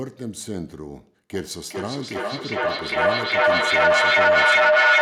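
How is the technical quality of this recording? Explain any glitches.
The recording has a clear problem: a feedback echo between two devices kicks in at 1.33 s and runs to the end. Two devices in the same room are on the call, each mic catching what the other's speaker plays, and neither echo canceller touches the other's output. The speech comes round again roughly every 0.4 s, thinner and ringier each pass, and the loop is hot enough that the repeats build up, peaking about 14 dB above the speech itself.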